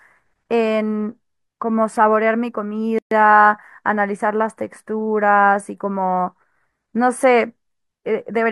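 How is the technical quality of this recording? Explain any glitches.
The recording has one clear glitch, a brief dropout partway through the speech.

Gap at a join of encoded pieces, from 2.99 to 3.11 s: the audio appears to have been encoded in separate sections and spliced without trimming, so the encoder's start-up silence and the padding on the previous section's final frame both remain at the seam. The result is a silence of about 129 ms cutting into continuous speech, with edges smeared by the codec, after which the speech resumes exactly where it broke off.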